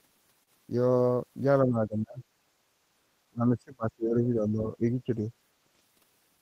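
At 0.43 s the speech holds on one sound for a moment, until 0.49 s. This is a short stall from a late packet. A packet missed its slot and the jitter buffer ran dry. The receiver stretched the last sound by 36 ms to cover the gap. Then it carried on from the same place, so nothing is lost. The cost is 36 ms of extra delay and a brief held, slightly buzzy sound.

From 1.65 s to 2.22 s the voice sinks sharply, by about 20 dB at its deepest, for roughly half a second. It returns from 3.31 s to 5.26 s. This time the dip is deeper, about 25 dB, and lasts roughly two seconds. Parts thin out and drop away. The likely cause is speech suppressed in double talk. Both sides spoke at once, and the echo canceller could not tell the local talker from loudspeaker echo. So it turned everything down.

From 5.80 s to 6.05 s the speech runs fast, at 113% speed, but its pitch stays the same. This is a jitter buffer speed-up. 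The buffer held more audio than its target. To shrink the delay, the receiver cut many short pitch-period pieces in a row, roughly 40 ms in total. The result sounds briefly rushed.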